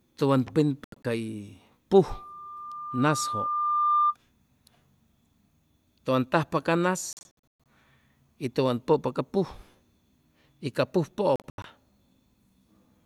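From 0.84 to 1.05 s the speech breaks into short silences, about 120 ms lost across 200 ms and the longest gap near 80 ms. It then resumes as though it had kept playing. This is a Bluetooth dropout, likely audio packets reaching the headphones too late and being discarded.

From 2.09 to 4.15 s a loudspeaker feedback squeal appears. The microphone is picking up the speaker it feeds, and the loop gain exceeds one at 1.2 kHz. That tone swells over roughly two seconds to about 5 dB above the speech.

The same dropout gapping returns from 7.13 to 7.66 s, with about 325 ms lost and the longest gap 120 ms. It recurs from 11.36 to 11.65 s, with about 160 ms lost and the longest gap 80 ms.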